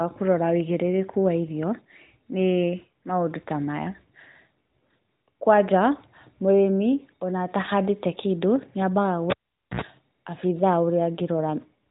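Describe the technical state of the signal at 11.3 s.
At 11.3 s the speech is intact, carried through the AMR narrowband mobile codec with its usual band limit near 3.8 kHz and nothing going wrong at that moment.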